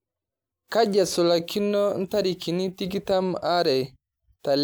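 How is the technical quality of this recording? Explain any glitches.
Nothing here trips me up: the speech comes across without any glitches to explain.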